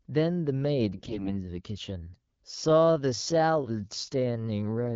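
AMR bit errors from 0.96 to 1.32 s make this speech recording turn hoarse and gargly: roughly one bit in ten of the weakly protected frame data arrived flipped, misplacing excitation pulses and skewing pitch, gain and spectral detail. A time-stretched section runs from 1.96 s to the end, where the pace abruptly drops to about 0.63 times normal speed with unchanged pitch, likely from software repeating short segments to lengthen the audio.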